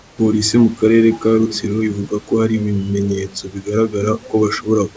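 From 0.00 to 0.18 s, the room background is replaced by comfort noise: a steady, featureless hiss about 3 dB quieter, likely because discontinuous transmission stopped sending audio before speech began and the receiver synthesised a filler shaped like the background.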